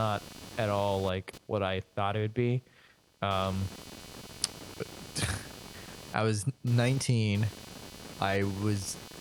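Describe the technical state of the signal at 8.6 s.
At 8.6 s the speech carries computer activity noise, present across the whole clip. Processor, graphics or mouse load shifts the shared audio ground, adding a buzz pulsing roughly 300 times per second, about 20 dB below the speech. A spectrogram shows a comb of lines near 300 Hz spacing; the waveform shows a fine ripple in pauses.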